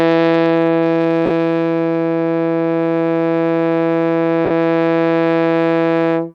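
At 1.26 s the music breaks into a short noisy smear lasting about 45 ms, and the same happens at 4.45 s for about 53 ms. Both are lost LE Audio frames. The gap lengths fit runs of six and seven 7.5 ms LC3 frames. During each gap the decoder repeats the last good spectrum with randomised signs and fades it, so tonal content turns into a brief hiss-like blur before the music resumes.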